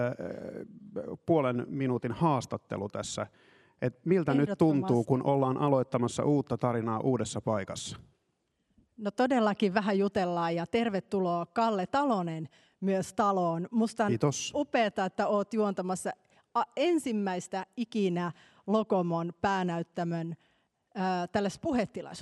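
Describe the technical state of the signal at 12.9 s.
No fault is audible at 12.9 s; the signal is intact at that moment.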